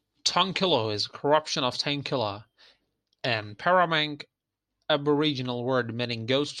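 No technical faults can be heard anywhere in the speech recording, with the signal holding steady and continuous throughout.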